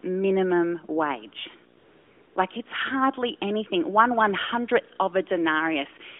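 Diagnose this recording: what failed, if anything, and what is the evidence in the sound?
AMR comfort noise, from the codec's discontinuous transmission in call processing, fills the gap from 1.78 to 2.36 s. For those 0.58 s the real background is replaced by a smooth, steady hiss that switches in and out abruptly. The sender judged the line silent, stopped sending speech frames, and the receiver synthesised noise from a coarse level-and-spectrum description. A packet-loss dropout would instead give dead silence or a repeated fragment. The surrounding narrowband AMR path, limited to about 200 Hz to 3.4 kHz, shows only light coding damage.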